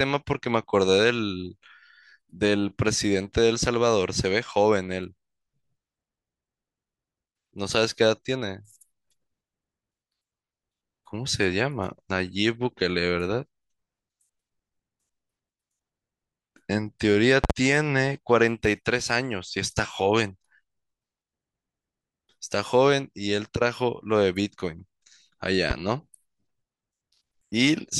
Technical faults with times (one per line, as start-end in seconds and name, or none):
17.44-17.53 loud pop
25.71-25.73 loud pop